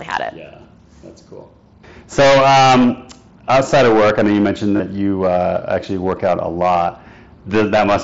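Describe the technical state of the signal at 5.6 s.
Hard clipping at 5.6 s, as throughout the clip: the speech is driven about 21 dB past full scale, so roughly a tenth of samples are flattened, giving harsh fuzz.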